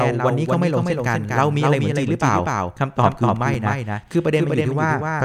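Throughout, the speech carries a doubled audio track: a second full-band copy trails about a fifth of a second behind, roughly 5 dB quieter, likely from a slower capture path. The waveform shows every onset repeated. At 1.54 s and 3.54 s, overlapping chunks replay 6.5 ms of audio at joins spaced 2.0 s apart, giving clicks that appear as thin vertical lines on a spectrogram.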